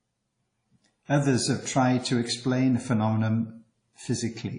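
A low-bitrate transform codec, likely WMA compression, has quantised the speech coarsely for the whole clip, which fits a rate near 32 kbps. The damage is plainly audible: nothing remains above 10.1 kHz, the speech rings and smears, and a washy hiss breathes with the speech.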